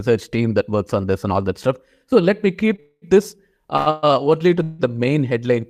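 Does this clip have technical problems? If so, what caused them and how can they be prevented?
Yes. There are short stalls from a late packet at 2.76–2.80 s, just after "let me", and at 3.77–3.88 s. In each, a packet arrived late and the jitter buffer ran dry. The last sound was held, about 20 ms and 100 ms, then the speech resumed unchanged. A deeper jitter buffer would prevent this.

There are three call audio freezes. One runs from 2.80 to 3.04 s and fades to brief silence. One runs from 3.90 to 4.05 s, just before "only to the main". The last is at 4.63–4.81 s, between "only to" and "the main". Each one holds a fading tail of the last sound for up to about 0.2 s. This is likely packets delayed in transit, so the buffer ran empty and a gap was inserted. Nothing is lost. Adaptive buffering and a steadier network path would prevent it.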